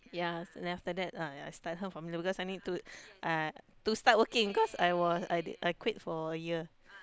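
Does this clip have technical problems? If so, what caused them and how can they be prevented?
No, nothing technical goes wrong anywhere in this speech recording, so there's nothing to track down or guard against here.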